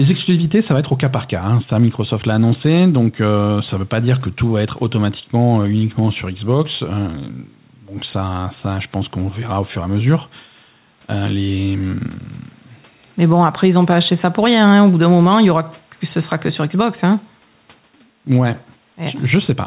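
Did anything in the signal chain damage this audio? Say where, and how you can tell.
Yes. Gain pumping runs throughout. The gain swings by around 10 dB, pulled down under each loud sound. The likely cause is input gain set far too high, with a fast limiter pulling it down. A noise gate would silence the gaps; pumping instead swings the gain up and down.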